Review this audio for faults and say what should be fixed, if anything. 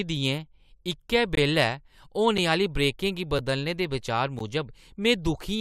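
Two gaps between stream segments break up the speech, one from 1.35 to 1.37 s and one at 4.39 s. Each is a short, hard-edged hole of silence, about 21 ms and 13 ms long, where the timestamps of adjacent segments don't meet and the player pads the missing span with nothing. The segments appear to be 1 s long. No audio is lost: the gap pushes the following material later in time. To prevent it, make each segment's start timestamp exactly match the previous segment's end when packaging the stream.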